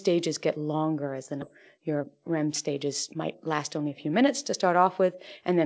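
At about 1.42 s there is a skip ahead. Roughly a second of speech never plays. Nothing fills the gap. The audio on either side is butted together, so playback jumps forward abruptly. The dropped stretch takes away a matching amount of delay.

From 1.77 s to 4.23 s a jitter buffer speed-up follows. The receiver trims short pitch-period pieces again and again, removing around a fifth of a second in total. Speech runs at 109% speed with unchanged pitch and sounds hurried. Throughout, the G.722 call path caps the audio at 8 kHz.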